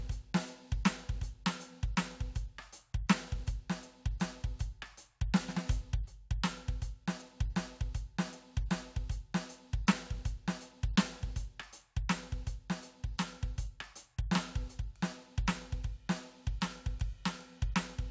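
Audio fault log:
No fault is heard in this music.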